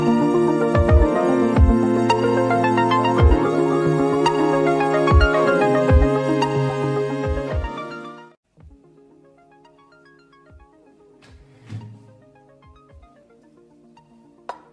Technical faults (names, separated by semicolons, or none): none